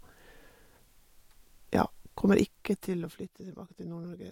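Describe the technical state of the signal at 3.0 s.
At 3.0 s the speech is in the middle of a stretch of zipper noise running from 2.38 to 3.41 s. The level is being pulled down by around 15 dB in 2 dB jumps rather than a smooth fade, about ten steps a second, and each jump leaves a small click. Unlike random crackle or dropout clicks, these ticks come at a regular rate and stop once the level stops moving.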